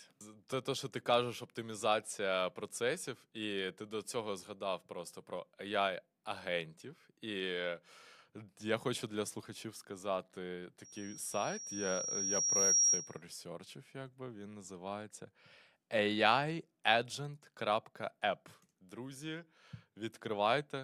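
A speech recording with a loudspeaker feedback squeal from 10.84 s to 13.22 s. A single tone at 5.7 kHz swells over about two seconds until it sits roughly 10 dB above the speech. The microphone is picking up its own loudspeaker, and at that frequency the loop gain exceeds one. On a spectrogram it appears as one bright horizontal line that strengthens steadily. The waveform shows a growing, uniform envelope overriding the speech.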